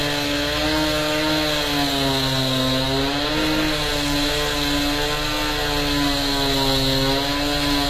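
Throughout the clip the treble sounds gritty and metallic, with nothing above 15 kHz, and its harmonics don't line up with the lower range. This is likely HE-AAC compression, rebuilding the top band from copied lower bands, which fits a bitrate near 20 kbps.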